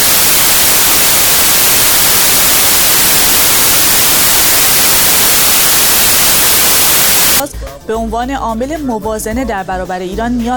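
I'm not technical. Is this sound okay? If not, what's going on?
No. Samples built from the wrong bytes run from the start to 7.4 s: the playback reads each tiny piece of sound with its bytes out of order, so meaningless fine detail becomes loud, harsh hissing noise.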